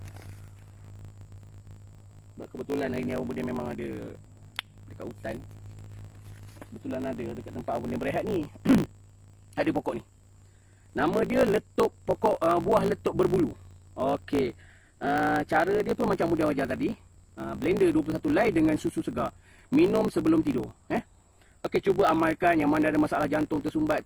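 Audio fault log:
throughout, block size mismatch (truncated): block tails are dropped, giving a 54.4 Hz buzz, with the audio running 1.16 times fast at near-normal pitch, which fits 1024-sample written blocks. Periodic waveform discontinuities and vertical spectrogram stripes.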